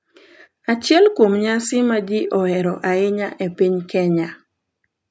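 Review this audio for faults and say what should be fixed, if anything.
No faults; nothing needs fixing.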